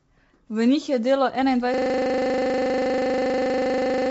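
Speech with a rough, grainy texture, noise between harmonics and nothing above 7.7 kHz, likely from low-delay AAC compression (AAC-ELD) at a low bitrate around 24 kbps. After "njih je delo", at 1.74 s, a system hang loop sets in: one 40 ms piece of audio repeats exactly until the end, producing a steady 25 Hz buzz.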